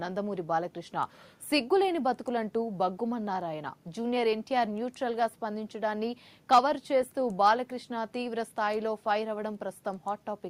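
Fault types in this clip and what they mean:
No fault types can be heard in the clip, so there are none to list or explain.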